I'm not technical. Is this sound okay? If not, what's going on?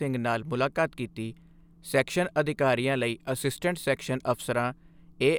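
Yes, this sound is okay, and nothing is going wrong in it.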